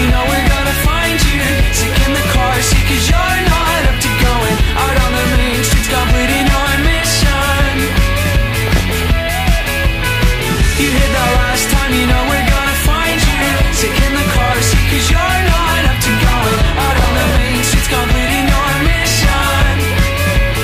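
Four short bursts of DAB burbling break into the sound. They run from 3.53 to 3.82 s, 8.67 to 9.05 s, 13.36 to 13.54 s, and 16.75 to 17.37 s. Each burst puts short blips of noise over the audio. Weak reception let bit errors, under one percent, slip past error correction into the MP2 data. Corrupted samples then put short noise blips in single sub-bands.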